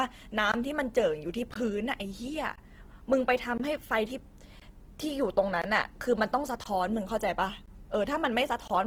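Across the whole speech clip the voice has a rough, grainy texture, with tonal parts of the sound turning noisy rather than swirling, while the top end still reaches about 20.2 kHz. This plainly audible damage is likely Opus compression in its music (CELT) mode at a low rate, which points to around 16 kbps. The encoder keeps each band's energy but, short of bits, refills the detail with folded or noise-like content, so the voice loses its clean harmonic structure.

Beginning at 0.52 to 0.54 s and recurring every 1.02 s through 8.68 to 8.70 s, nine short holes cut into the sound, each 20 ms of silence. This is a gap between chunks: the audio was delivered in 1.0 s pieces, and each join received a block of inserted silence, likely from padding or a late-starting player. No material is missing, but the speech is regularly interrupted at every boundary.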